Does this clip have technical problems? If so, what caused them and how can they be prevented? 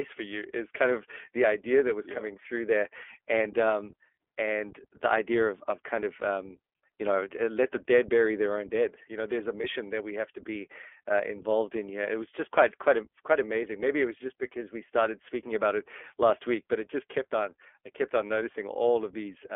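Yes. The iLBC codec encoded the whole clip as narrowband VoIP, coding each 20 ms frame independently at a rate that fits its 15.2 kbps mode. Everything outside roughly 0.3 to 3.4 kHz is gone, and the speech has a plainly audible rough, synthetic edge. To prevent this, use a wideband codec such as Opus or G.722 when the network allows it.

Lost iLBC frames happened from 9.62 to 9.66 s, between "you know there's a" and "that we have to". The gap points to a single dropped 20 ms packet. The decoder filled it by repeating the last pitch cycle mixed with noise, which sounds like a brief held, buzzy vowel. Because each frame stands alone, the speech recovers right away. To prevent this, reduce packet loss with a stable network, QoS priority for voice traffic, or redundant or FEC packets.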